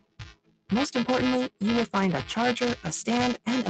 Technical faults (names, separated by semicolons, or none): buffer tearing; noise suppressor applied to music or sounds; sound cut by the noise suppressor